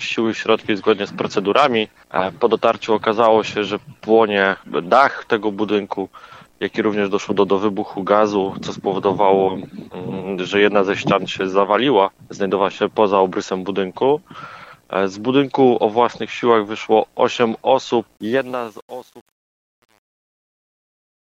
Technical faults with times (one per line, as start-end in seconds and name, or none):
18.17-21.34 truncation distortion on a fade